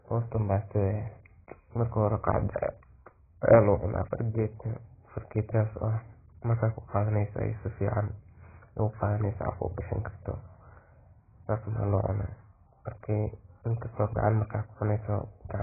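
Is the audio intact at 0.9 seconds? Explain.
No. At 0.9 seconds the speech is dull and smeared, with a warbling, fizzy edge on sustained sounds and sibilants, and this persists through the whole clip. The likely cause is heavy AAC compression: the encoder quantises each frame's spectrum so coarsely that it discards everything above 2.5 kHz and blanks or noise-fills bands, which fits a bitrate near 12 kbps. A spectrogram shows a hard flat ceiling at 2.5 kHz with patchy holes beneath it.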